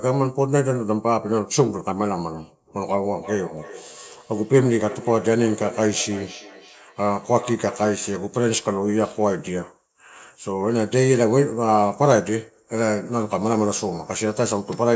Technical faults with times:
3.15-8.12 feedback echo between two devices

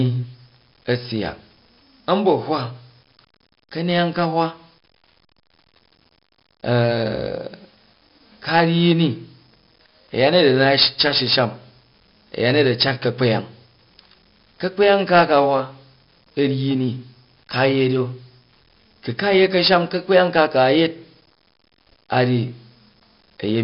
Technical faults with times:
0.00-23.63 4-bit ADPCM compression

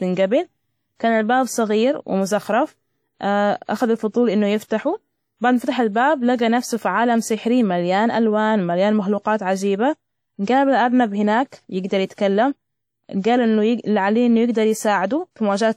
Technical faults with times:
0.00-15.77 WMA compression

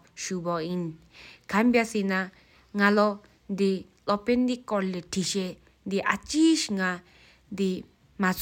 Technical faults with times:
none

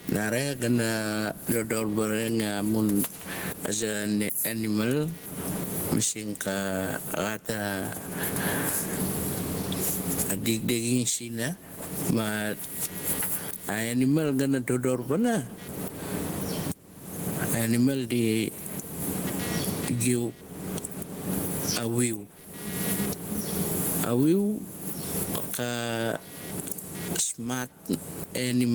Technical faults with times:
0.00-28.75 computer activity noise
0.00-28.75 gain pumping

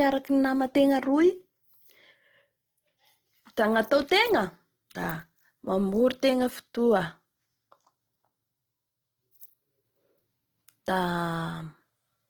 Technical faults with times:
0.00-12.30 Opus compression

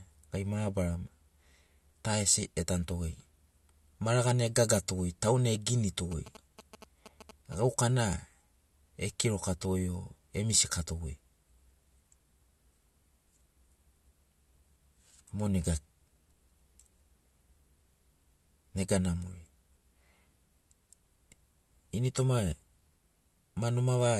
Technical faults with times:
6.12-7.55 GSM signalling bursts

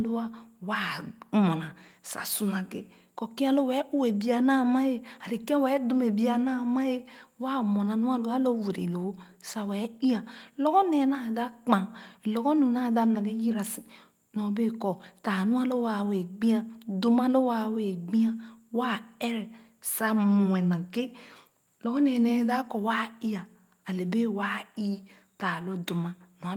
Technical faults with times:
none

